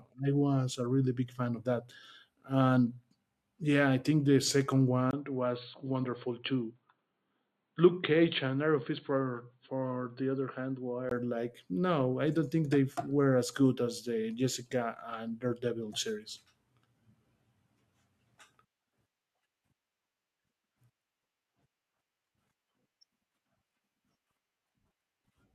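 From 5.11 to 11.11 s, after "I think the second", the input likely switched to a poorer device, with a 20 ms silence. Nothing above 4.4 kHz passes, so speech turns dull, boxy and slightly quieter over faint noise until "like no I don't".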